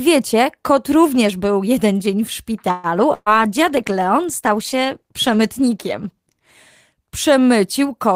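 A speech clip. Just after "był jeden dzień w", from 2.71 to 2.87 s, the sound stretches into a fading buzz or hiss for about 120 ms, then carries on exactly where it stopped, likely a call audio freeze. Nothing is skipped, which separates it from packet loss; the speech simply runs later. From 3.14 to 3.31 s comes a burst of packet loss: the last sound is held and fades for about 125 ms, with a brief silence of about 20 ms, and the speech resumes roughly 120 ms further on. Unlike the freeze, that stretch is gone for good. Overlapping it, from 3.26 to 7.23 s, a call bitrate drop makes the speech coarser, rougher and duller for about 3.4 s at its worst, which points to the encoder falling from around 32 to 18 kbps. This is a sustained change in tone over several seconds rather than a brief gap.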